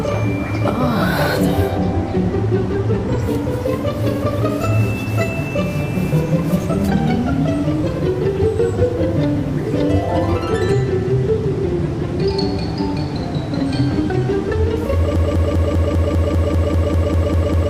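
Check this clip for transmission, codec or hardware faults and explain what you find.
There's one fault, and it runs right to the end. From 15.16 s you get a broken-record loop: a 198 ms chunk repeats 13 times back to back, likely because the stream stalled and kept resending its last piece, so whatever should have followed is lost.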